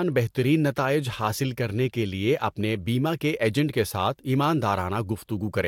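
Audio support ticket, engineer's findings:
No audible faults found.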